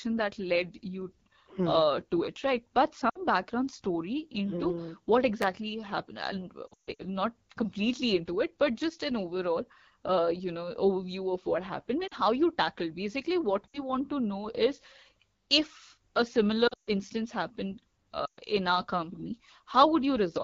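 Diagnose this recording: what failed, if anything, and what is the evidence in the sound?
AMR wideband (HD Voice) codec, throughout the 20 seconds, at the codec stage. The speech has a plainly audible rough, raspy texture, and the top band above 6.4 kHz sounds hissy rather than detailed. That fits AMR-WB running at 8.85 kbit/s, one of its two lowest rates. At that rate the pulse excitation driving the vocal tract model is too coarse to carry fine voice structure, and the 6.4 to 7 kHz region is only shaped noise.

Lost AMR speech frames, at the network stage, at 3.09–3.19 s, 6.67–7.04 s, 12.07–12.14 s, 13.69–13.83 s, 16.67–16.90 s and 18.25–18.40 s. The short gaps at 3.09, 12.07 and 13.69 s (about 40 to 60 ms lost) are brief drops to near silence. Between 6.67 and 7.04 s, about 240 ms goes missing across 320 ms, with a 140 ms run that drops to near silence. Between 16.67 and 16.90 s, 180 ms is lost across 200 ms, again with a 140 ms run. 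At 18.25 s, 120 ms is lost. Radio errors corrupted these frames, so the decoder repeated the last good pitch and filter settings at falling gain and then brought the voice back weak or rough.

Chunks out of order, at 5.42–5.44 s, at the buffer or storage stage. A 10 ms piece of audio plays one chunk late, after the chunk that should follow it. No sound is lost, but the wrong order leaves three hard joins that produce a tiny jumbled moment. This points to a write or delivery path that let one block overtake another.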